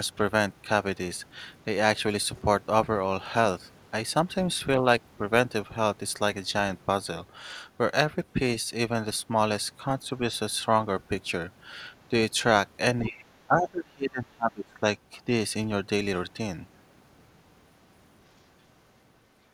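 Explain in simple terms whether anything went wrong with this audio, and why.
Between 13.02 and 13.29 s, and again from 13.47 to 14.88 s, the speech suddenly drops in level, less deeply the first time and much more deeply the second, as if being held down. The likely cause is speech suppressed in double talk: both people spoke at once, and the echo canceller, unable to tell this talker from the returning loudspeaker sound, turned everything down. Unlike a network dropout, the sound is squeezed quieter rather than cut off cleanly.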